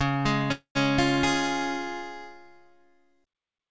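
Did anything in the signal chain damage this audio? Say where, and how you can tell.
Yes, at the network and jitter-buffer stage of the call path, whose G.722 codec band-limits everything to nothing above 8 kHz. From 0.52 to 0.78 s there is a call audio freeze: the last sound is stretched into a fading buzz or hiss, ending in about 100 ms of silence, and then the audio resumes exactly where it stopped. Nothing is skipped; everything afterwards simply arrives about 0.23 s late. That sets it apart from a packet-loss dropout, which would cut material out, and points to a likely jitter-buffer underrun.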